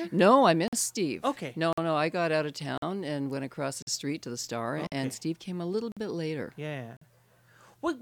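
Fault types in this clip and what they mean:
Gap between chunks: the speech breaks with hard-edged holes of about 48 ms, recurring every 1.05 s from 0.68 s to 7.02 s, for example just before "no I got out". The audio was delivered in 1-second chunks with silence inserted at each join, so nothing is lost but the flow stutters.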